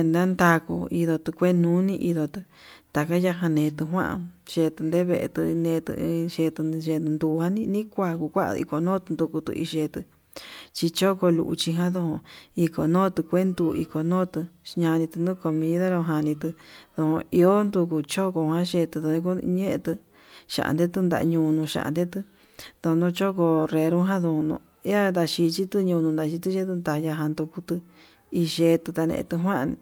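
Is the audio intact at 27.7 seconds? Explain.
Yes, at 27.7 seconds the speech plays through intact, with no audible dropout, glitch or distortion at that moment.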